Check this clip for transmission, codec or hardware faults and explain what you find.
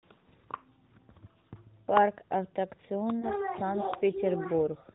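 Two brief transmission faults occur in this speech. Both are lost AMR speech frames, heard through AMR narrowband mobile coding that removes everything above 4 kHz.

At 0.74–0.78 s and again at 3.20–3.26 s, one 20 ms frame was lost. The decoder filled each gap by reusing the last pitch and vocal-tract settings at lower gain, giving a short dip or warble. The waveform envelope sags briefly, and spectrogram harmonics smear flat.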